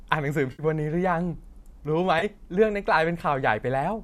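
AAC frame loss with concealment hits at 0.52 to 0.63 s and again at 2.19 to 2.24 s. The decoder patches gaps of about 70 ms and 30 ms from the last good spectrum, leaving brief smeared, noisy patches, likely over a low-delay AAC stream with 10 ms frames.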